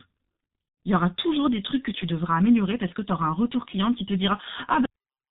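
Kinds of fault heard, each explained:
G.723.1 codec: the whole clip has gone through this low-rate telephony codec, about 6.3 kbit/s here, and the damage is heavy. Nothing gets through above 4 kHz, so the speech sounds muffled and hoarse, and the consonants smear together.
VoIP packet loss concealed by the speech codec: about 90 ms went missing between 0.68 and 0.77 s, which fits three 30 ms frames. The decoder filled the gap by stretching the last sound and fading it out, and it stays weak or distorted going into "il y aura toujours".
Cut-off end: at 4.86 s the audio just stops in the middle of a sound and drops straight to digital silence with no natural decay. The final buffers were never written or played, so the remaining half second or so is dead.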